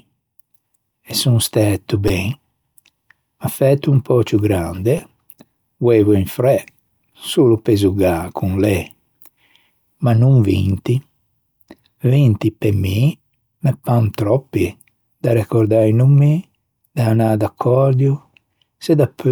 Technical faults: repeated buffer

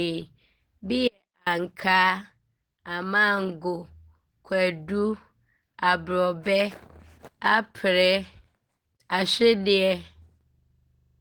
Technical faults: Opus compression; audio dropout to a faint residue

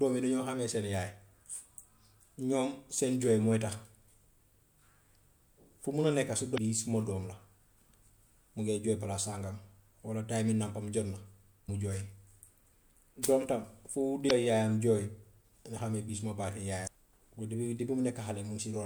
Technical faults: damaged data in a compressed stream

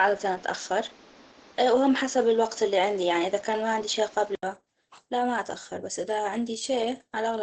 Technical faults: Opus compression; input switched to a poorer device

